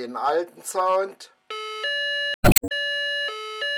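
At 2.32 s the sound briefly breaks up for about a third of a second, until 2.64 s. This is damaged data in a compressed stream: a stretch of the encoded bytes was corrupted, so the decoder misread the frames in that span, lost its place in the stream and had to hunt for the next valid frame header before clean decoding could resume.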